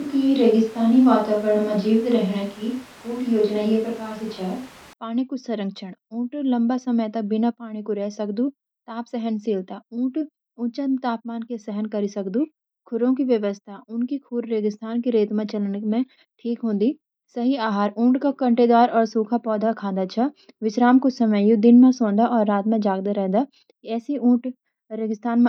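From the very start until 4.93 s, the speech sounds roomy and hollow, with thin bass. Background noise sits roughly 25 dB below the voice. Loudness barely changes. This is likely a switch to a distant microphone. Close, direct sound returns abruptly at 4.93 s.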